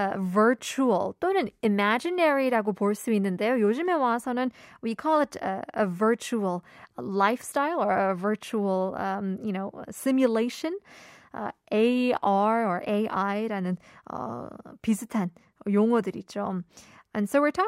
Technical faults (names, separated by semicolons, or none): none